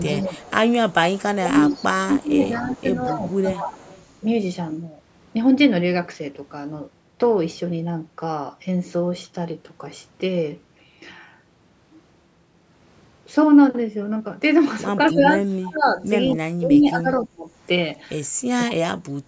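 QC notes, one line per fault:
0.00–4.03 s, echo leak: A faint copy of the speech trails about 211 ms behind, roughly 20 dB down. Likely a loudspeaker echo the far end's canceller missed.
0.10–3.80 s, speech suppressed in double talk: The speech dips by up to roughly 15 dB, about 1.5 s in total. Likely the canceller ducking both talkers at once.
15.05–15.14 s, echo leak: A brief, very faint echo, about 30 dB down, follows 211 ms behind. Likely residual loudspeaker pickup slipping past the canceller.
15.12–17.49 s, speech suppressed in double talk: The speech drops deeply, up to around 35 dB, for roughly 1.5 s. Likely suppression triggered while both sides spoke.
16.25–17.17 s, echo leak: A delayed copy returns 211 ms late, about 20 dB below the speech. Likely uncancelled echo from the far loudspeaker.
18.73–19.28 s, speech suppressed in double talk: The speech is cut down by roughly 30 dB for about 0.4 s. 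Likely the canceller clamping during overlapping talk.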